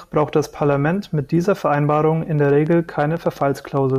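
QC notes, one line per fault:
2.39–3.97 s, train of clicks: around fifteen near-identical pulses arrive at about 8.3 per second with uneven spacing, peaking roughly level with the speech. They pop audibly over the talking and in its gaps, likely interference from nearby equipment or a faulty connection.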